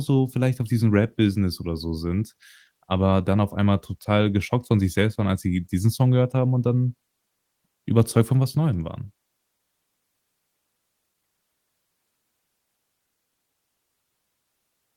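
No technical faults can be heard anywhere in this speech recording. There is no moment in the audio that calls for a time stamp or closer attention.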